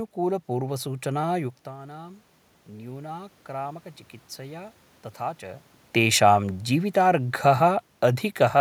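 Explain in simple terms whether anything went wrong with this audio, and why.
Automatic gain rising, 1.64 to 3.93 s: when the talker moved and got quieter, the system slowly turned itself up, raising voice and room noise together.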